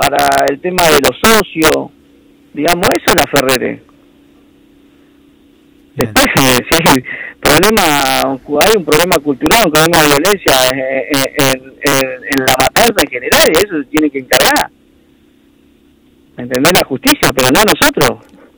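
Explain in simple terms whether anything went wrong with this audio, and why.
Integer overflow is the problem here, and it runs through the whole clip. The audio was pushed louder than the digital format can hold. Instead of stopping at the ceiling, the loudest moments wrapped around to the opposite extreme, like a car odometer rolling past its last number. Only a small fraction of the audio, around one moment in fifty, crosses that line. Each time it does, you hear a harsh, violent crack on the loud parts, much sharper than ordinary distortion.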